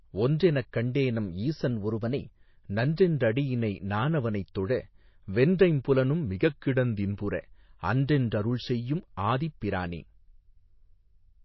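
Throughout the clip, a likely cause is MP3 compression at a bitrate starved enough to point to something around 24 kbps. With so few bits, the encoder discards everything above 5.8 kHz and zeroes weaker frequency lines, which flicker in and out between frames. The speech therefore sounds dull and plainly damaged, with a watery, swirling texture, metallic chirps on s sounds, and smeared onsets.

From 1.71 to 2.40 s, a drift correction step, likely from clock-matching software adjusting its buffer, raises the playback rate by 6.36% in one jump. Speed and pitch rise together by 107 cents, a little over a semitone, so the speech briefly runs fast and sharp before snapping back to normal.

From 6.27 to 7.13 s, right after "வென்றைம் புலனும்", a second drift correction step does the opposite, slowing playback by 6.36%. Pitch drops by 114 cents, so the speech sags flat and slow for that stretch and then abruptly returns to its proper rate.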